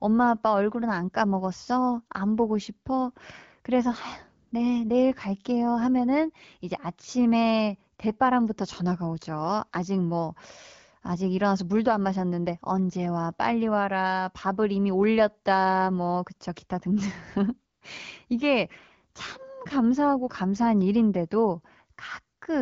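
At 4.47 to 4.51 s, 17.73 to 17.81 s and 22.37 to 22.41 s there are brief AMR comfort noise patches. The phone treated those gaps as silence and stopped sending speech frames, so the receiver filled them with smooth synthetic noise, which switches in and out in place of the real background.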